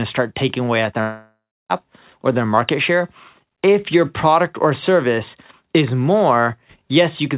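Speech over a narrowband call path with nothing above 4 kHz, as G.711 would give, has a long network dropout from 1.01 to 1.72 s, between "start taking away at" and "or their market share". A fading concealment buzz gives way to about 0.3 s of silence, and roughly 0.69 s of audio never returns, likely from lost packets.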